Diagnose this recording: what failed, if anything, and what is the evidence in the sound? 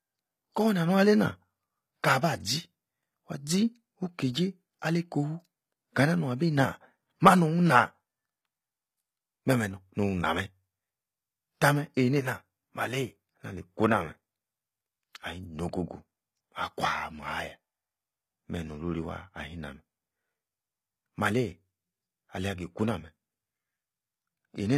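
Codec stage: treble reaches 20.3 kHz, yet s sounds stay gritty and lispy throughout. That points to likely HE-AAC compression synthesising highs at around 20 kbps, rather than dulling low-pass.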